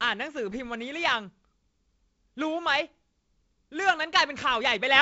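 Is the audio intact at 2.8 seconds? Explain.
Yes, the audio is intact at 2.8 seconds; the speech there carries only the band limit of G.722 wideband telephone coding, with nothing above about 7.7 kHz.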